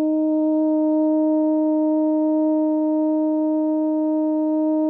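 A short music excerpt. Nothing technically wrong can be heard in it.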